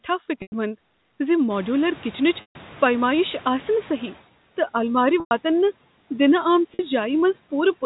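Packet loss with pitch repetition first appears at 0.42 to 0.52 s, a 100 ms gap. The receiver bridges the missing audio by repeating the last pitch period and fading it out over about 50 ms. The sound briefly holds with a buzzy, frozen quality, drops to silence for the rest of the gap, and then cross-fades back into the speech.

The noise suppressor catching up runs from 1.5 to 4.2 s. Around 1.5 s the room noise jumps by about 24 dB, and the suppressor's noise estimate trails that sudden rise. The noise therefore comes through with little reduction at first. Over roughly 2.7 seconds it sinks by about 9 dB as the estimate adapts to the new level.

Packet loss with pitch repetition returns at 2.41 to 2.55 s, the longest gap at 140 ms. Here the repeated period fades fully away, leaving a silence before the speech cross-fades back. The same thing happens at 5.2 to 5.31 s over 110 ms. The last gap, at 6.74 to 6.79 s, lasts only 50 ms, so it is mostly covered by the fading repetition and sounds like a brief held, buzzy stretch rather than a dropout.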